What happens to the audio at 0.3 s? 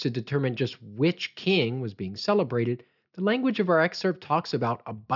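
Nothing goes wrong at 0.3 s; the speech there plays through cleanly, with no dropout, click, distortion or other fault.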